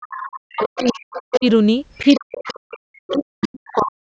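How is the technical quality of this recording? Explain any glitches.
The recording has two recurring echo-control faults that interfere with each other.

Other side's voice leaking through: a second voice is audible from 0.02 to 1.47 s, 1.96 to 2.6 s and 3.11 to 3.83 s, about 10 to 20 dB below the main speech. This is likely loudspeaker playback of the far end that the echo canceller did not fully remove from the microphone.

Speech suppressed in double talk: from 0.37 to 1.45 s and from 2.21 s to the end, the main talker dips, by up to about 40 dB at the deepest, for roughly half a second and then roughly a second and a half in total. The likely cause is that the echo canceller could not separate the overlapping voices and attenuated both.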